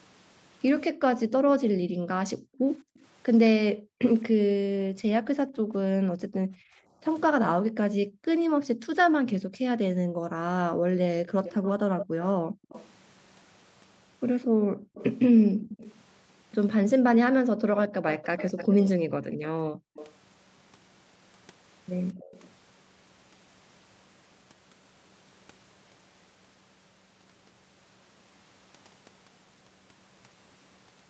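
From 1.25 to 12.69 s the background is gated by the echo canceller: while the far end plays, it clamps the microphone by up to about 40 dB, so the room sound drops out for several seconds in total. A waveform shows flat, near-silent gaps, and a spectrogram shows blank vertical bands. The same gating returns briefly from 14.47 to 15.61 s and for about a second between 17.3 and 19.95 s.

A faint delayed copy of the sound, 217 ms behind, appears at 2.94 to 2.99 s, then much louder from 11.44 to 12.91 s, from 14.42 to 15.98 s, from 18.08 to 20.14 s and from 22.2 to 22.5 s. This is likely echo leak, where the canceller let loudspeaker pickup through. A spectrogram shows ghost harmonics trailing the originals.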